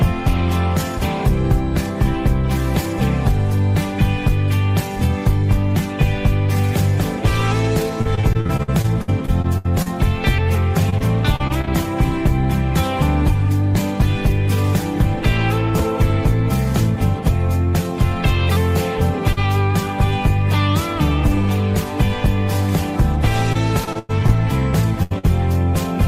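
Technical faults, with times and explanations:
8.01–9.88 s, 10.90–11.69 s and 23.53–24.31 s: repeated packet loss (robotic sound). Holes keep coming: 14, 6 and 5 of them, the longest about 65, 35 and 99 ms. Each one gets patched by stretching the last bit of sound, so roughly a sixth to a quarter of each stretch is filler, and it turns choppy with pieces missing.
19.33–19.39 s: short concealed packet loss. About 40 ms of audio never made it in time, so the receiver carried the previous sound through the hole and blended back into the real audio. It comes across as a quick smear or wobble.
25.03–25.12 s and 25.18–25.25 s: burst of packet loss, losing about 80 ms and then 40 ms in quick succession. Each time the last sound is held and faded down, giving a buzz or a dying hiss. The audio then picks up further along with that part gone.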